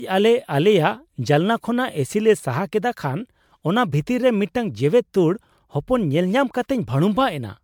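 Generation loss runs through the whole speech clip: swirly, hollow and smeared, with blurred attacks, likely from roughly ten MP3 passes at around 128 kbit/s, nothing above 19.9 kHz.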